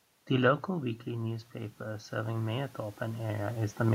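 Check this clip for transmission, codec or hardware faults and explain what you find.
One fault is present: automatic gain rising. From 0.66 s to 3.85 s the speech and the room noise behind it swell together by about 6 dB. The input level had dropped by about 9 dB when the talker moved back near 0.5 s. The automatic gain control read that as too quiet and gradually raised its gain, lifting the background along with the voice.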